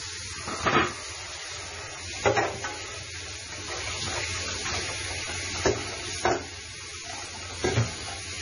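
From start to finish, nothing sounds above 10.5 kHz. Quiet detail swirls and turns watery, flickering in and out. Transients smear. This is likely heavy MP3 compression, which fits a very low bitrate near 24 kbps. Short of bits, the encoder dropped the treble and weak frequency lines.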